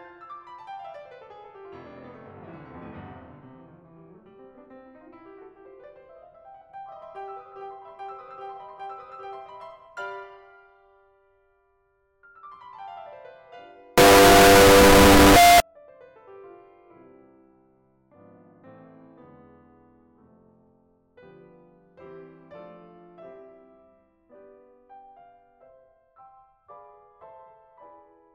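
Signed and unsigned mixed up, 13.98 to 15.60 s: the music turns into loud, harsh distortion, likely from 16-bit samples read with the top bit flipped.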